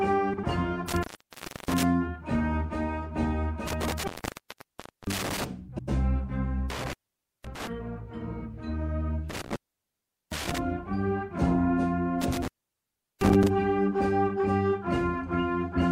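At 0.33 to 0.44 s, two adjacent runs of frames reached the decoder in the wrong order and were played back as received. The result is frames out of order: two blocks of about 48 ms each swap places, which fits pairs of 24 ms frames. This produces a short garbled flutter, and no time is lost.

At 0.89 to 1.83 s, a loose connection opens for 0.65 s. This is an intermittent contact. The sound drops out with crackle at the break and the reconnection, and only faint hiss remains while the line is open. The same thing happens at 3.67 to 5.45 s, this time open for about 1.0 s.

At 5.68 to 5.89 s, frames are out of order again, this time with two swapped blocks of 96 ms each. That is longer than the first swap, so the flutter lasts longer.

The contact opens three more times: at 6.70 to 7.67 s for 0.51 s, at 9.30 to 10.58 s for 0.76 s, and at 12.21 to 13.48 s for 0.73 s. Each of these dropouts is crackly at its edges and leaves faint hiss.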